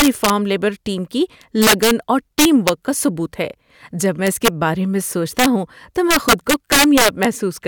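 Speech cracks violently on loud peaks at 0.0–0.30, 1.62–1.91, 2.39–2.69, 4.27–4.48, 5.39–5.46 and 6.11–7.25 s. This is integer overflow: a gain pushed about 3 to 7 dB past the integer limit wrapped peaks to the opposite sign instead of limiting them.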